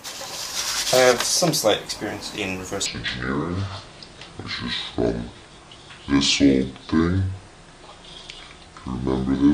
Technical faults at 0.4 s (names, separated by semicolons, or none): none